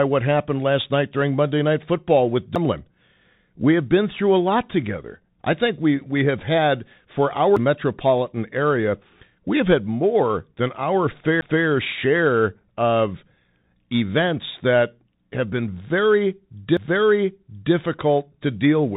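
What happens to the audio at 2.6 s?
At 2.55 s a CD skip occurs. The player mutes for a few milliseconds and resumes from another point on the disc, heard as a tick and a sudden jump. On a waveform it shows as a brief flat gap with an abrupt step, and on a spectrogram as a thin vertical click line. Throughout, including this moment, the Bluetooth CVSD headset codec applies. Its 1-bit adaptive up-down coding leaves nothing above 3.8 kHz and adds scratchy granular hiss, seen as an empty spectrogram band above 3.8 kHz.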